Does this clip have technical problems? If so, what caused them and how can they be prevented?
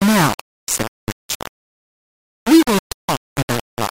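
Yes. The speech is coarse and grainy from start to finish, and the grit rises and falls with the voice rather than sitting underneath it as a steady hiss. That's low bit depth without dither, likely from rounding the signal to only about 3 bits. With so few steps the rounding error tracks the waveform, so it sounds like distortion, and it's loud, only around 10 dB below the speech. Quiet syllables and tails break up or sputter. To prevent it, keep the working bit depth at 16 bits or more, and add dither whenever you do reduce it.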